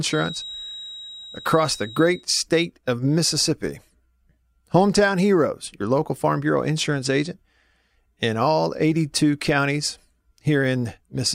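A thin, steady whistle near 3.8 kHz sits behind the speech from the start until 2.27 s, just before "state of", swelling and fading slowly in level about 15 dB below it. This feedback whistle is likely a loudspeaker-to-microphone loop held right at the edge of feedback.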